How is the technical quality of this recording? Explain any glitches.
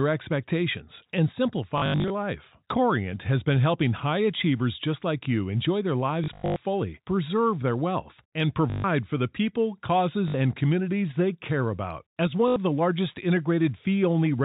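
Quality is degraded by five short dropouts. The band-limited telephone sound, with nothing above 4 kHz, fits G.711 coding.

At 1.78–2.10 s, 6.24–6.56 s, 8.70–8.84 s (after "preserve their wealth and"), 10.28–10.34 s (before "and communities they care") and 12.48–12.56 s (before "the largest"), there is packet loss with the last packet repeated. The receiver replays the previous packet to fill each gap. The spacing fits 20 ms packets, so each gap sounds like a roughly 50 Hz robotic stutter.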